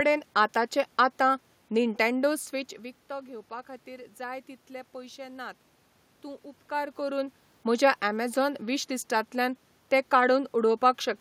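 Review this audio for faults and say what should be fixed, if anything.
No faults; nothing needs fixing.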